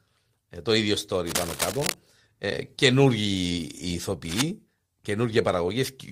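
Just after "ε το ίδιο", from 1.26 to 1.95 s, and again from 4.25 to 4.42 s, cable scratch noise appears as dense, uneven scratching only slightly below the speech level, likely from a worn cable or connector being moved so its contact resistance fluctuates.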